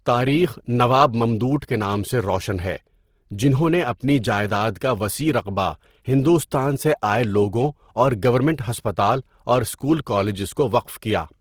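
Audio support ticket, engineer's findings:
Speech grainy, rough and noise-textured for the full clip, plainly audible. Likely Opus compression in music (CELT) mode, at a rate consistent with about 16 kbps. Band energies are held but starved bands are filled by folding or noise, giving grit rather than MP3-style swirl or spectral holes. Bandwidth stays full, with content up to 20.3 kHz, so this is not the muffled, hoarse SILK/hybrid speech mode.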